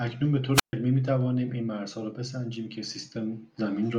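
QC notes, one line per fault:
0.54–0.73 s, wireless microphone squelch dropout: the FM radio link from the microphone weakens until the receiver's squelch gate shuts the output, so a short surge of hiss gives way to about 136 ms of near silence before the speech returns.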